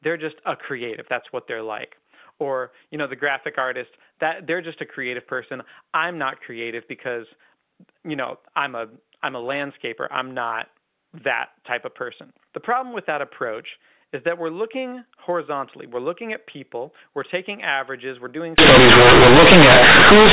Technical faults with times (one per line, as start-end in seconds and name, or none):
18.58-20.33 companded audio read as linear